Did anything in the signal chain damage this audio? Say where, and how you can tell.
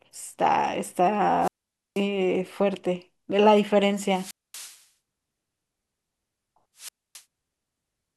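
Yes. Wireless microphone squelch dropout at the radio link: at 1.4–2.02 s, 4.04–4.85 s and 6.77–7.23 s, hiss swells, then the receiver mutes for about 490, 230 and 270 ms. The FM signal fades below the squelch threshold, silencing output until reception recovers.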